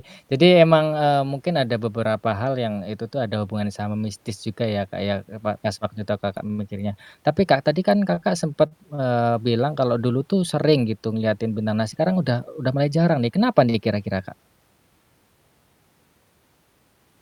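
A packet arrived late four times and the jitter buffer ran dry each time, so the receiver held the last bit of speech until it came, then carried on with nothing lost. These short stalls from a late packet fall at 6.47 to 6.52 s (29 ms stretched), 8.15 to 8.19 s just after "tadi kan" (23 ms), 8.67 to 8.73 s (39 ms), and 8.95 to 9.08 s just before "bilang kalau dulu tuh" (34 ms). Each is heard as a sound briefly drawn out, with a faint buzz or dip, nudging the timing later.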